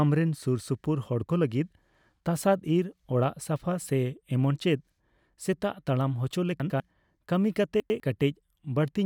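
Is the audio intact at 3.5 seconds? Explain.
Yes, at 3.5 seconds the speech plays through cleanly, with no dropout, click, distortion or other fault to be heard at that moment.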